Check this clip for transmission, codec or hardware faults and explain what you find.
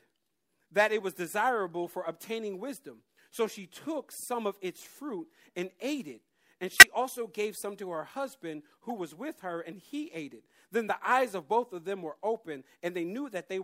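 Damaged compressed frames reached the decoder, which played them anyway: a corrupt frame decoded fault, three times in this speech. Flipped bits made the decoder misread gains and codes, so energy landed at the wrong frequencies for the length of each bad frame. At 1.87 s there is a faint glitch, at 6.72 to 6.83 s a loud glitch peaking around -5 dBFS, and at 8.89 to 8.92 s a quiet glitch, each brief enough to suggest a few damaged frames.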